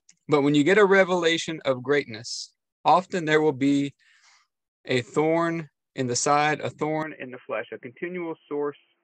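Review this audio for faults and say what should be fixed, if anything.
At 7.03 s the sound turns abruptly dull and boxy until the end, with nothing above 3.1 kHz; likely the input switched to a poorer device. Locking recording to one fixed input device and disabling automatic switching would prevent it.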